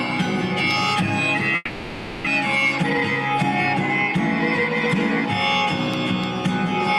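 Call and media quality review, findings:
Long network dropout, 1.55 to 2.28 s. Sound trails off into a fading buzz, a brief gap of about 10 ms, then resumes with roughly 0.4 s gone. Likely a receiver-side loss burst: concealment stretched the last audio over the hole, then jumped ahead. Playout delay shifts by around 0.3 s.

Jitter buffer speed-up, 2.83 to 3.35 s. Audio runs noticeably hurried, about 132% speed, pitch unchanged. Buffer overfilled, as after delayed packets land together, so the receiver trimmed pitch-period-sized slices back to back, shaving roughly 150 ms to pull latency down.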